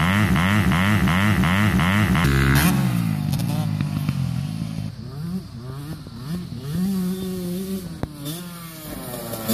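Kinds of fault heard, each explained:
Broken-record loop: a stalled player likely resent its last fragment, so a 0.36 s piece repeats five times until 2.24 s, replacing the audio.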